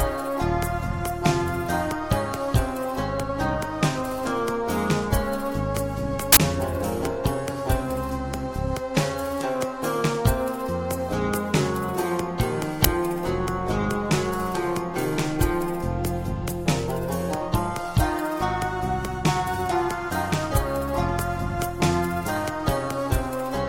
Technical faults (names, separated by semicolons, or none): uninitialised buffer